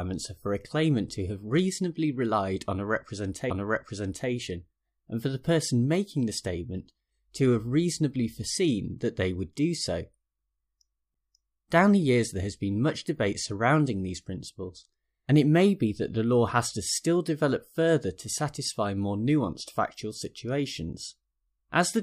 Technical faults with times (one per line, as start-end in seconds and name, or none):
3.50 CD skip